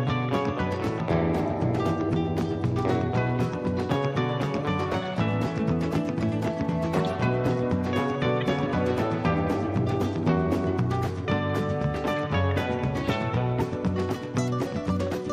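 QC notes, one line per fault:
6.99 s, 8.41 s and 13.59–13.61 s, corrupt frame decoded: short squeaks or noise bursts, the first covering about two frames, the others about one. Damaged frame data was decoded as if valid, so misread gains and codes put energy at the wrong frequencies, peaking around -20, -25 and -15 dBFS.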